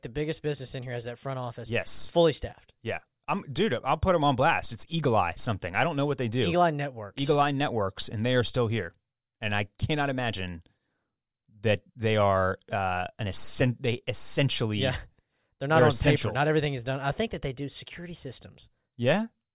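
No technical faults are audible.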